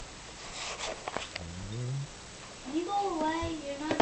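A skip ahead occurs at 1.23 to 1.25 s. Playback jumps forward with no fill, dropping roughly 400 ms of audio and joining the two sides almost directly. The jitter buffer likely discarded a stretch when it overflowed while later packets were already waiting. On a waveform, the envelope changes abruptly at a single splice point with no silent gap. On a spectrogram, the harmonic and formant patterns break off and resume with different content, as if a vertical cut had been made.

A jitter buffer speed-up follows from 1.33 to 2.06 s, with the audio running at about 115% of normal rate while keeping its pitch. Here the receiver holds more audio than it targets and trims it by removing many short slices of one or a few pitch periods in succession, around a tenth of a second in total. The result sounds hurried. On a spectrogram the harmonic spacing stays constant while events arrive compressed in time. 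A zoomed waveform shows periodic cycles missing at the splice points.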